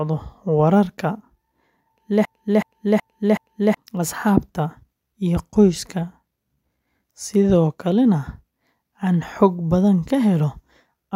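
From 2.25 s to 3.77 s the speech falls into a broken-record loop: a 0.37 s fragment plays four times back to back, each copy identical, and whatever should have been said in that stretch never arrives. The likely cause is a stalled player, encoder or stream that kept resending the last piece it held. On a spectrogram the same block of formants and harmonics tiles end to end at a 0.37 s pitch, and the waveform shows a repeating envelope with hard seams at each restart.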